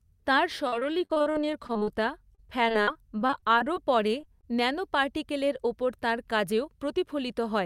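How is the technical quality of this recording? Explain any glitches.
The recording is degraded by network problems through its first half, with three kinds of glitch.

Repeated packet loss (robotic sound) runs from 0.67 to 1.89 s and again from 2.35 to 3.78 s. There are 14 and then 13 gaps, none longer than 47 ms. The receiver patches each gap by extending the previous sound, about 29% and then 17% of those spans. The result is choppy speech with pieces missing. Unlike a single loss, the holes keep coming.

A jitter buffer slow-down overlaps these stretches, from 0.86 to 2.77 s and from 3.48 to 4.09 s, just before "ন্যানো পার্টিকলের ওপর তাঁর". The receiver repeats pitch periods to rebuild its reserve, adding 79 ms and then 47 ms. Speech drifts to 96% and then 93% speed while the pitch stays put. It sounds dragged, not broken up.

Short concealed packet loss hits at 4.21 to 4.25 s and 4.41 to 4.45 s, just before "ন্যানো পার্টিকলের ওপর তাঁর". 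Each time, about 20 ms never arrives and is bridged from the preceding sound. Each is an isolated brief smear or wobble, not the continuous choppiness of the earlier stretches.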